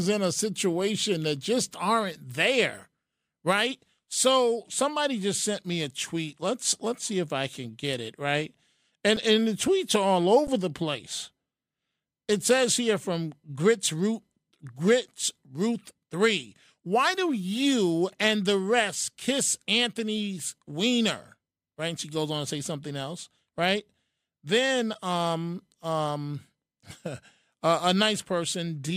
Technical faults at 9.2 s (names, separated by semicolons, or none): underrun with held sample